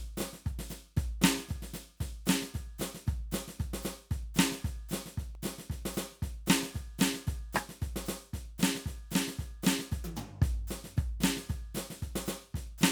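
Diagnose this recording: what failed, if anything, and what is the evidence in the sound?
The fault is at the storage and playback stage: CD scratch ticks in the music from 5.11 to 5.83 s. Seven short ticks, each a couple of milliseconds at most, recur about eight times a second, once per disc revolution, where the player concealed samples that error correction could not rebuild.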